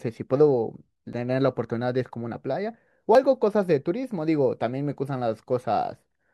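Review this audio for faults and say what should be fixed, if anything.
At 1.13 s and again at 3.15 s the speech jumps forward with no gap of silence, losing roughly 10 ms the first time and about twice that the second. This is likely a dropped buffer (overrun): the hardware overwrote a chunk before the software collected it, so the surrounding audio is spliced together. Unlike an underrun, which inserts a gap or stutter, nothing is repeated or paused. Give the capture thread higher priority or use larger buffers so samples are always read in time.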